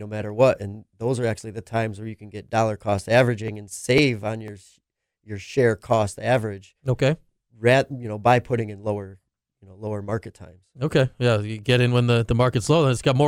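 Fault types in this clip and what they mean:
Periodic USB or driver dropouts: between 2.49 and 4.98 s, after "where you can get" and up to "your share cost average", the speech picks up small ticks spaced exactly 0.5 s apart, about seven of them. Each is roughly a millisecond of audio skipped outright rather than replaced with silence, as a blocked bus or driver stalls the stream. The clockwork spacing and tiny loss set this apart from random clicks or irregular buffer underruns.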